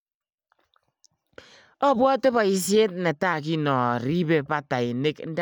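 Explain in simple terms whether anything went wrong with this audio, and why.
From 3.33 s to 5.13 s the speech plays about 5.7% slower and drops roughly a semitone in pitch, then snaps back. This is a drift correction step, likely from clock-matching software abruptly slowing playback to refill its buffer.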